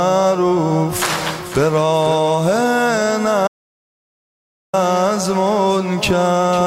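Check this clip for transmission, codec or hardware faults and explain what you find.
One fault is present: an audio dropout to silence from 3.48 s to 4.73 s, about 1.26 s long. The sound stops abruptly into silence with no room tone, then resumes mid-flow. The input was likely lost briefly while the recorder kept writing silence.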